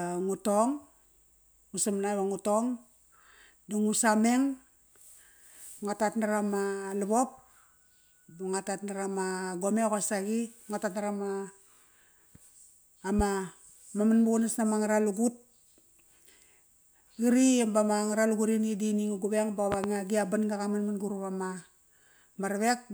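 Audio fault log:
13.19–13.23 s and 19.72–19.87 s: loud pop. A single sharp pop lands at 13.19 s, about 10 dB above the speech. A pair of pops in quick succession follows at 19.72 s, about 15 dB above the speech, just before "gi a banga qaman". The speech continues underneath both. Each is a sudden voltage pulse added to the signal, likely from a plug, switch, static or driver glitch.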